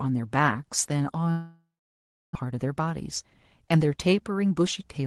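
A long network dropout runs from 1.31 to 2.37 s. The last sound trails on as a fading buzz, then about 0.68 s of silence follows. When the audio resumes, roughly 0.6 s of material is gone, likely because packets stopped arriving for that stretch.

A jitter buffer speed-up follows from 2.45 s to the end. With the delay swollen by around 0.4 s after the gap, the receiver trims short pitch-period slices repeatedly, about a fifth of a second in all. The speech runs at 108% speed, hurried but at unchanged pitch.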